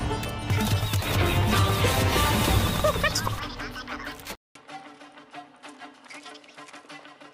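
An input switch to a poorer device comes at 4.35 s and runs to the end: after a 200 ms silence the sound drops roughly 10 dB, loses everything above 11.4 kHz and gains a faint new noise floor, likely from recording switching to a different microphone.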